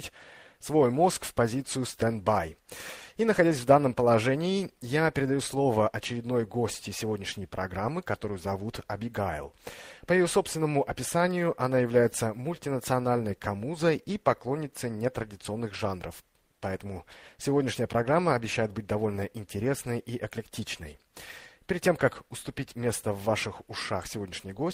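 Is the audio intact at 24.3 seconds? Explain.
Yes, at 24.3 seconds the audio is intact, with no dropout, click, distortion or other fault to be heard at that moment.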